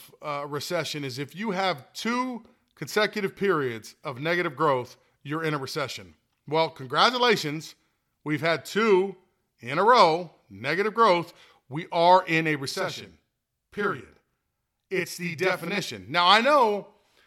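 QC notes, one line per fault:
12.71–15.78 s, channel delay (doubling): just after "are in a", one channel runs 40 ms behind the other, and when the two are summed to mono the late copy lands as a distinct second attack at equal level, so the speech sounds doubled with a short slap.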